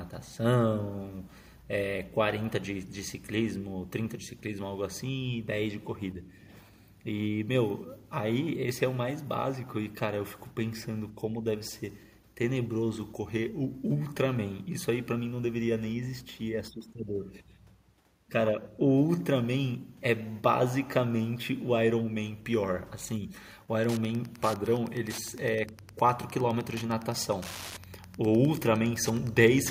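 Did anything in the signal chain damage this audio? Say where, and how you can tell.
Yes. Wi-Fi interference enters at the analogue stage, from about 23.77 s to the end at 29.71 s. A steady ticking runs under the speech about ten times a second, roughly 20 dB below it. The ticks follow a 102.4 ms beacon period: a nearby Wi-Fi radio's transmissions are rectified by the audio circuit. A spectrogram shows thin, evenly spaced broadband vertical lines, and the waveform shows regular small spikes.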